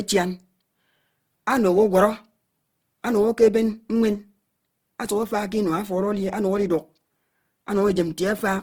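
From start to end the speech sounds rough and grainy, its tonal parts turned noisy, while the bandwidth stays full up to 20.3 kHz. The likely cause is Opus compression in music mode, filling starved bands with folded or noise energy, which fits about 16 kbps.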